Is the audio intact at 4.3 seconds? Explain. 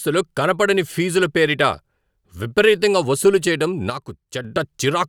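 No. From 3.90 to 4.45 s the speech drops abruptly by about 6 dB and then returns to its former level. The likely cause is one channel dropping out: with only one stereo channel feeding the mono sum, material shared by both channels loses half its level.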